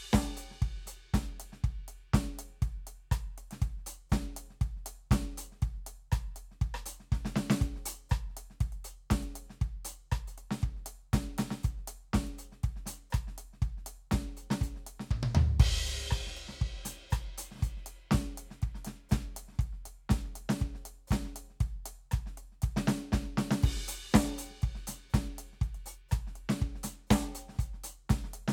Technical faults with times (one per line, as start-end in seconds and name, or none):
none